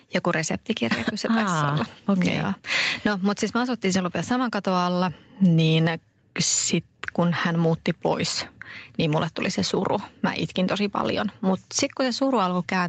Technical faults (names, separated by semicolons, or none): gain pumping